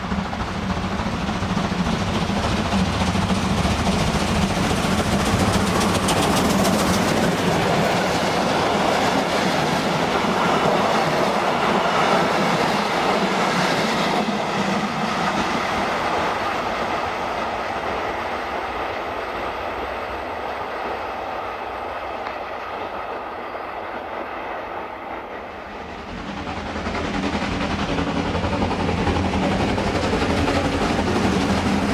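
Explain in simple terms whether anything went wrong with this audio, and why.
Nothing went wrong with this audio, as no technical fault can be heard anywhere in it. There is nothing here that needs explaining or fixing.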